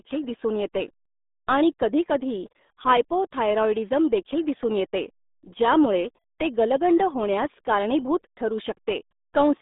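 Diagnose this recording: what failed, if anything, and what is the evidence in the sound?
The failure is at the codec stage: the speech has been through the RealAudio 14.4 codec (RealAudio 1), and the damage runs through the whole clip. The sound is muffled and gargly, which fits a low-rate coder working near 8 kbit/s. On a spectrogram the energy sits in a band from roughly 200 Hz to 3.7 kHz, with a hard ceiling and nothing above 3.8 kHz. The coder discards that upper range and crudely models what remains.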